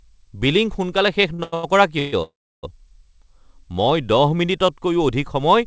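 From 1.34 to 2.14 s the speech drags and hiccups through five brief hang-ups, the longest 134 ms, with nearly half that stretch held over. These are repeated stalls (stutter): packets arrived late, the jitter buffer kept emptying, and the receiver stretched the last sound each time, losing nothing.

Between 2.22 and 2.65 s the audio hangs for 404 ms, a short fading buzz giving way to about 320 ms of silence before resuming where it stopped. This call audio freeze was likely caused by packets held up in transit, with the G.722 path's nothing-above-8 kHz band audible throughout.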